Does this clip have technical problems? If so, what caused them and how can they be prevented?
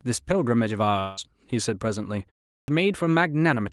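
Yes. From 0.99 to 1.19 s there's what sounds like a long network dropout, likely packets lost in transit. The receiver papers over it with a fading buzzy continuation, and about 180 ms of speech is simply gone. A bigger jitter buffer or forward error correction on the link would help.

At 2.53 s, after a 0.3 s pause, the speech starts abruptly with its opening clipped, about 150 ms swallowed while the output device wakes up again. Keeping the device active through silence, rather than letting it sleep, prevents this.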